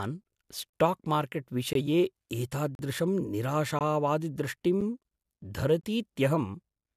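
Speech, interrupted by gaps between stream segments. Hard-edged silent holes of about 8 to 40 ms fall at 0.70, 1.73, 2.75, 3.79, 4.81 and 5.81 s. They recur roughly every second, which points to one-second segments whose timestamps leave small gaps the player fills with silence.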